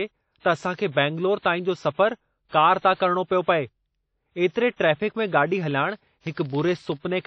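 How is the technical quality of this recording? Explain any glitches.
The recording has two clear problems: heavy coding damage throughout and a block-rate buzz near the end.

Throughout the speech, nothing is heard above 8.9 kHz. The sound is washy and ringing, with hiss that swells and fades with the voice. The likely cause is WMA compression at a low bitrate, around 32 kbps. Its long transform blocks smear quantisation noise over tens of milliseconds. Weak spectral detail is discarded.

From 5.57 s to the end, a filter restarted on every block adds a buzz at 21.5 Hz. Each block starts from silence because the filter loses its state. That puts a small transient at every boundary, which fits a 2048-sample block. The buzz follows the level of the speech.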